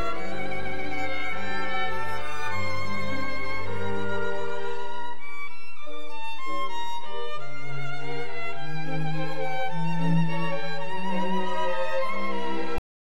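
The audio carries a DC offset throughout: nothing audible, but the waveform sits shifted off zero by a constant, wasting headroom and leaving steady energy at the very bottom of the spectrum. At 12.78 s the sound stops abruptly mid-event and falls to digital silence with no decay, a cut-off end caused by the final buffers never being written.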